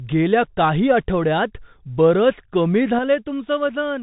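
The speech has passed through a Bluetooth CVSD headset codec, which encodes one bit per sample to signal only whether the waveform should step up or down, adapting its step size as it goes. The sound fits the codec's 64 kbit/s stream, and the band stops at about 3.8 kHz, so the audio is muffled and narrowband. Louder, brighter passages outrun the step size and distort, s sounds turn scratchy, and a grainy hiss sits under the speech throughout. A sudden gain jump follows at 2.99 s, right after "काही आठवड्यांत बरंच कमी", when the level drops by about 6 dB from one sample to the next and stays down to the end. The likely cause is a gain setting or bit shift applied with no ramp, so the speech and the background noise fall together in a single abrupt step.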